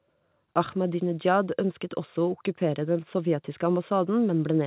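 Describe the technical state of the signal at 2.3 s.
At 2.3 s the speech is intact, with no dropout, glitch or distortion, only the narrow telephone-band sound of the G.711 mu-law call path, which carries nothing above about 4 kHz.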